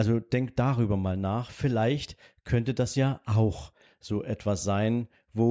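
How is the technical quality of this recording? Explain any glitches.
The recording's signal path shows no technical faults, so there are no glitches to explain.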